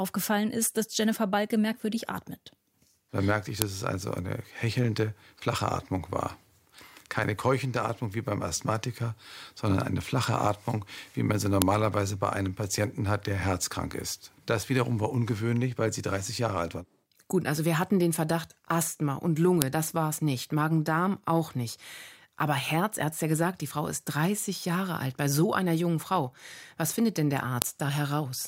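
At 3.62, 11.62, 19.62 and 27.62 s, a file header played as audio makes a sharp, loud snap every 8 s: header bytes at each joined piece's start sound as samples. The first follows "merkte ich", the third precedes "das war es nicht", the last follows "findet denn der". Each shows as a thin tall spike in the waveform and a vertical broadband line on a spectrogram.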